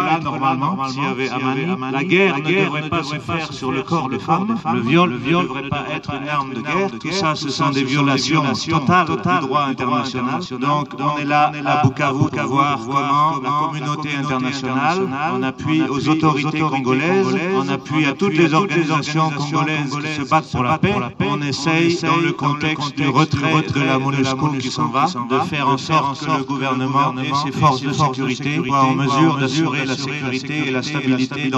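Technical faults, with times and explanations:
Throughout, doubled audio track: a dry, full-band copy trails about 0.4 s behind at roughly 5 dB down, likely from a second, slower capture path.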